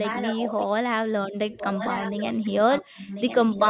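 From 0.0 to 0.62 s, 1.51 to 2.49 s and 2.71 to 3.7 s, a quieter copy of the speech returns 1.04 s late, strongest last, likely an echo leak.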